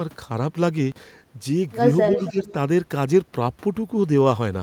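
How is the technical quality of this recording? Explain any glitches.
The recording has two overlapping faults from a speakerphone call, both between about 2.1 and 2.5 s.

Echo leak, 2.12 to 2.52 s: a faint copy of the speech returns 273 ms late, about 10 dB below the direct voice, likely because the far end's echo canceller passed loudspeaker pickup back. A spectrogram shows a weaker duplicate of the harmonic pattern, shifted right.

Speech suppressed in double talk, 2.17 to 2.47 s: the voice dips by around 10 dB, in pieces adding up to roughly 150 ms, likely because the echo canceller, unable to tell talker from echo, attenuated both. The waveform envelope shows notched gaps, and the spectrogram thins there.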